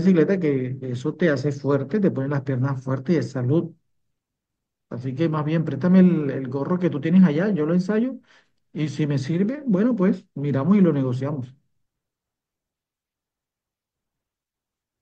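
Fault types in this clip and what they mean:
No faults detected in this speech recording; nothing to report.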